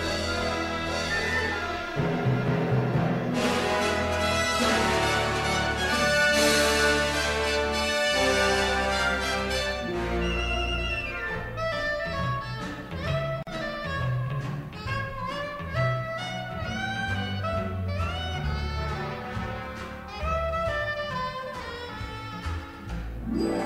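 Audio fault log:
13.43–13.47 s, gap at a join of encoded pieces: two separately encoded sections were spliced together without removing the encoder's start-up delay and the padding on the final frame, so that dead air stays in the stream. The result is a gap of about 43 ms cut into otherwise continuous sound, with its edges smeared by the codec. Playback then resumes exactly where it broke off, with nothing missing.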